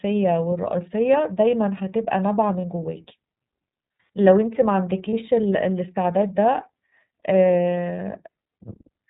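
Speech coded throughout with the iLBC codec: the band stops at 4 kHz, and the voice has a plainly audible rough, slightly synthetic edge. That points to iLBC's 30 ms frame mode at 13.33 kbps, where each frame's excitation is coded independently. Lost iLBC frames cause two brief dropouts, at 2.61–2.65 s and 5.10–5.14 s, each consistent with one missing 30 ms frame. The decoder fills each gap by repeating the last pitch cycle mixed with noise, which gives a short buzzy, held-vowel smear, and normal speech returns immediately afterward.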